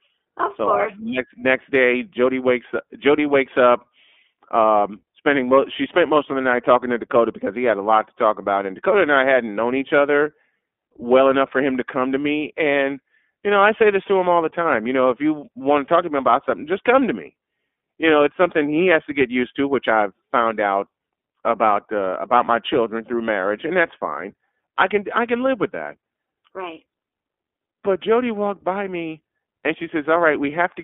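From start to finish the speech runs through the iLBC codec, and the damage is plainly audible. The line band sits at roughly 250 Hz to 3.5 kHz, so the top end is gone and the low end is thin. Because each short frame's excitation is coded on its own, with a grain that fits 20 ms frames at the 15.2 kbps mode, the voice comes across a bit rough and synthetic, almost buzzy.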